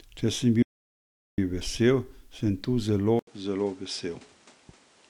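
At 0.63 s the input signal was lost, likely through a disconnected device, a failed link or a stray mute, while the recorder kept writing silence. This audio dropout to silence lasts 0.75 s, until 1.38 s. The speech stops abruptly mid-flow and the gap is silent with no room tone at all, so whatever was said there is gone. The speech resumes just before "vesel sem tu zelo".

Right after "vesel sem tu zelo", at 3.19 s, the system likely switched its input to a poorer device, and the change holds until the end of the clip. An 80 ms silence marks the switch. Then the speech turns duller, with nothing above 10.2 kHz, drops by roughly 5 dB in level, and carries a new background noise floor sitting roughly 30 dB below the speech.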